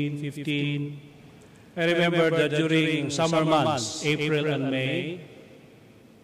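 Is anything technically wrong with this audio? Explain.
Yes. Throughout the clip there is a doubled audio track. The likely cause is the same signal being captured twice, once through a slower path, or an edit leaving two copies out of step. A second, full-band copy trails the original by roughly 150 ms at around 5 dB lower. With no decay or room colour on it, it sounds like a hard, clean slap-back echo that doubles every onset and makes transients sound stuttered rather than spacious.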